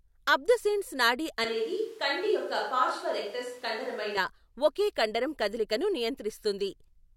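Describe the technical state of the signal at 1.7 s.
At 1.7 s the signal is in a switch to a distant microphone, running from 1.44 s, after "అబ్దుసెన్స్ నాడి", to 4.17 s, before "ఒకే కండరం కదలికను". The close pickup likely dropped out. The speech turns suddenly hollow and roomy, loses bass, falls about 5 dB, and carries background noise roughly 30 dB below it.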